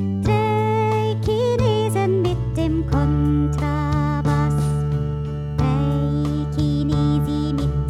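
From 2.94 to 5.81 s there's a switching supply whistle, a faint high tone wandering between about 2.76 and 2.98 kHz, sitting well below the signal. A switching power supply is running in an audible burst mode or beating with another one, leaking its whine in.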